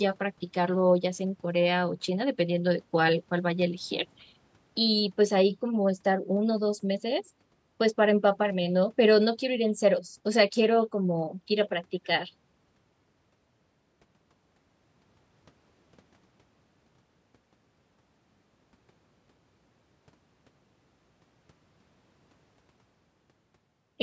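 No technical faults are audible.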